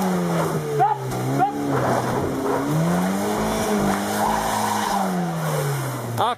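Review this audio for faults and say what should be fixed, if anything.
From 1.62 s to 5.31 s there is crude rate conversion. Samples are dropped without filtering, fitting a 48 kHz to 44.1 kHz change. A gritty, inharmonic fizz sits roughly 25 dB below the sound. Prevent it with a proper band-limited resampler.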